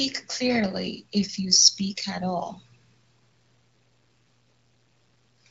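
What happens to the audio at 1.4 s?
Nothing goes wrong at 1.4 s: the speech carries on intact through that moment, with only the light, even coloration of the AMR wideband (HD Voice) codec at around 15.85 kbit/s.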